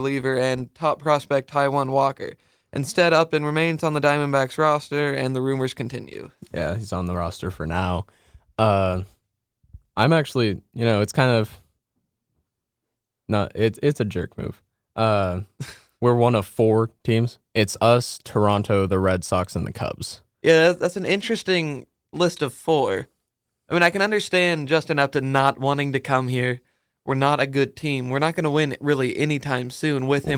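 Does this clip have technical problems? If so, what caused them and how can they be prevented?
No, there are no technical faults to fix here, and the Opus voice coding is doing its job, so there is nothing to prevent.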